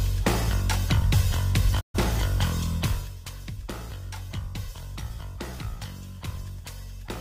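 At 1.79 s the sound fades out over about 20 ms and stays silent until 1.99 s, a hole of roughly 128 ms. This is a digital broadcast dropout: the receiver muted when frames went missing or failed their checks, which fits about three lost frames.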